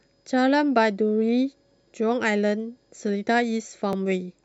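A speech recording with overlapping chunks: at 1.92 s and again at 3.93 s, about 12 ms of audio plays twice, heard as a click or stutter. The two joins are 2.0 s apart, so the audio was handled in 2-second chunks, each starting slightly before the previous one ended. Unlike a dropout, nothing is missing at these points. The stream briefly repeats itself, and the repeats fall on a strict, regular grid.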